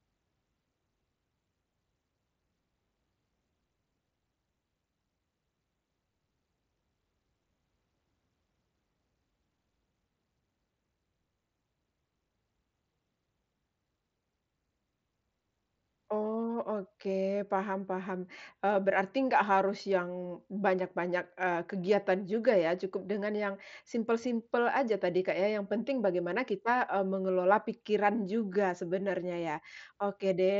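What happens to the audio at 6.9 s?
Nothing goes wrong at 6.9 s; the speech carries on intact through the Bluetooth mSBC headset path, with its usual band limit near 7.7 kHz.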